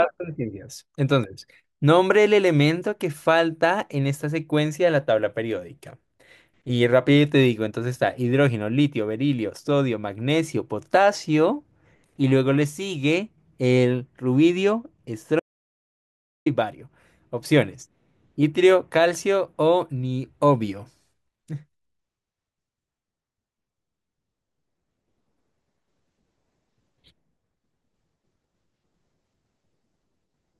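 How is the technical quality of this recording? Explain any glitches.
There is one clear glitch in this speech recording. From 15.40 s to 16.46 s, an audio dropout to silence cuts the speech off mid-flow and leaves about 1.06 s of total silence, with even the room tone gone, before the sound snaps back. The likely cause is a brief loss of the input signal, such as a link failure or momentary mute, while the recorder kept writing silence, so whatever was said in that gap is lost.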